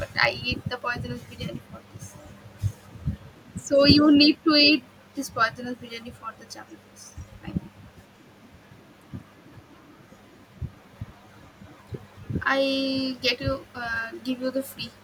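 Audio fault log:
7.19–7.25 s, echo leak: a very faint delayed copy of the speech slips in, trailing by 173 ms and sitting roughly 40 dB under it. It's likely a far-end loudspeaker's sound reaching the mic and getting past an echo canceller that didn't fully remove it.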